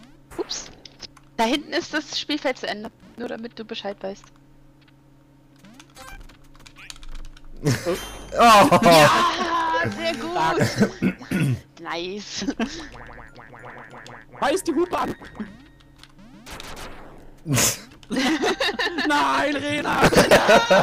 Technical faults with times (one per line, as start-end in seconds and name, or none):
2.84-3.28 processor overload crackle
6.12-6.33 processor overload crackle
14.93-15.26 processor overload crackle
19.78-20.38 processor overload crackle